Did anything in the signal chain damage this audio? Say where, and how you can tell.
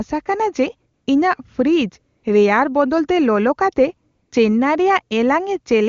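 Yes. AMR comfort noise appears in the call-processing stage at 0.93–1.07 s, 2.17–2.23 s and 4.11–4.31 s, where the real background gives way to a smooth, steady hiss. The phone judged these gaps silent and stopped sending speech frames. The receiver then synthesised filler noise from a coarse level-and-spectrum description.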